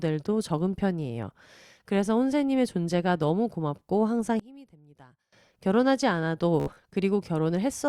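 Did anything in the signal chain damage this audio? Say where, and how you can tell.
Yes. One channel inverted, from 4.40 to 5.33 s: the speech drops by about 23 dB to a faint copy. This is likely a polarity-reversed wire in the analogue stage, so the centred voice cancels in the mono sum and only the channel difference survives.

Bluetooth stutter, from 6.60 to 6.78 s, on the wireless link: about 98 ms of audio is missing, scattered over 168 ms, with the longest gap 70 ms. The receiver replays its last short slice, giving a rapid buzzing repeat, which points to several lost packets.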